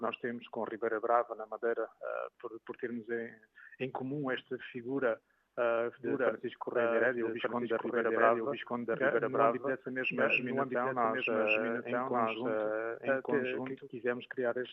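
From 6.04 s to 13.88 s a doubled audio track appears: a full-band copy trails the sound by about a second at roughly equal level, likely a second capture path running late. Unlike an echo, it has no decay or room colour, and it starts and stops abruptly.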